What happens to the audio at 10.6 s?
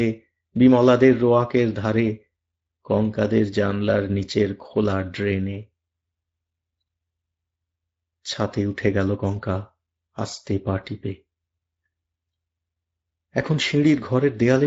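At 10.6 s you're hearing the Speex codec, which runs through the whole clip. Speech sounds noisy and hoarse, the kind of CELP damage that fits a mid setting around 16.8 kbps, and the top end is only shaped noise fill, with nothing above 7.7 kHz.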